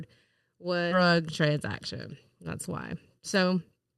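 Speech that lurches forward abruptly at 0.91 to 0.93 s, where the sound jumps ahead with no gap or fill, as if a chunk had been snipped out and the two sides butted together. This is a skip ahead: roughly seven tenths of a second of speech never reached playback, either lost in transit or discarded when the jitter buffer overflowed while later audio was already queued, so the delay shrank by about the same amount in one step. From 2.95 to 3.94 s the talker sounds hurried, running at about 113% of normal speed while the pitch stays put. That is a jitter buffer speed-up: with more audio held than the buffer's target, the receiver trimmed away small pitch-period-sized pieces again and again, removing roughly 150 ms in total to bring the delay back down. Throughout, the call codec's band limit near 12 kHz can be heard as a slightly dulled top end.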